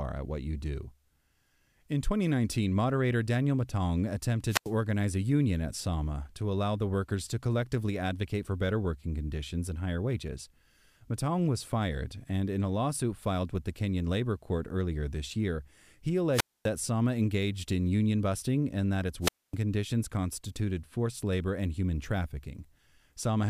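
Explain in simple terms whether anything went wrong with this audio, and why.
The speech suffers wireless microphone squelch dropout at 4.47 to 4.72 s, 16.32 to 16.69 s and 19.21 to 19.55 s. Each time, hiss swells, the sound mutes for about 90 to 250 ms, then returns. That burst of static separates it from a clean digital gap.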